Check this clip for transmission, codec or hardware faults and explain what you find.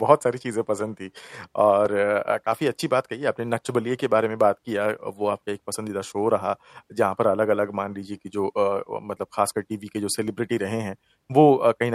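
One fault is present: clock drift buffer slips in this speech clip. From 0.81 s to 11.33 s a click recurs about every 1.05 s, roughly ten in all, each a jump in the waveform. The likely cause is two devices on separate clocks differing by a few hundred parts per million, so the buffer between them drifts until a short block of samples is dropped or repeated. The strict regular spacing distinguishes it from packet-loss dropouts, which fall irregularly and leave audible gaps.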